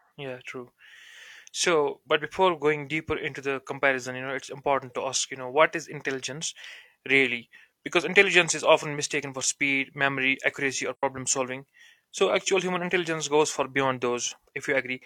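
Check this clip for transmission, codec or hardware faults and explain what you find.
One codec fault is present: an AAC frame loss with muting at 10.94 to 11.03 s. The speech drops out for about 85 ms, which fits two lost AAC frames. With those frames missing, the decoder zeroed their spectral content. The overlapping transform windows on either side then fade the signal down into the gap and back up after it, so the dropout has soft edges rather than an abrupt cut.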